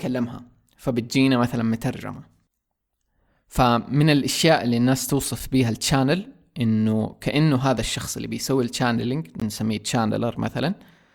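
At 5.39 s and again at 9.40 s, the speech drops into brief hard-edged silences, about 5 ms and 18 ms long: gaps between stream segments. Adjacent 2-second segments' time stamps fail to meet, so the player pads silence; no audio is lost.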